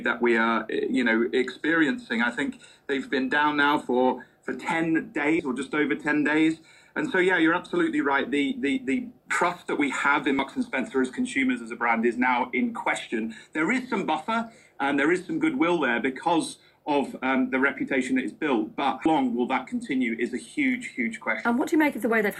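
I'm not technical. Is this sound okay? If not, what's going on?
No. Two kinds of fault can be heard.

There is damaged data in a compressed stream at 5.36 to 5.40 s and again at 10.39 s. Part of the stored file is corrupted there, so the playback software cannot read those pieces correctly. It loses its place and jumps forward to the next readable point. Each one is a brief chirp or blip, very short and sharp.

At 9.31 s and 19.06 s the sound jumps abruptly, with roughly a third of a second gone and the two sides joined with no pause. The gaps are about 10 seconds apart. That regular spacing is the sign of audio missing between chunks: the recording was likely made in 10-second pieces, and a small slice was dropped each time one piece ended and the next began.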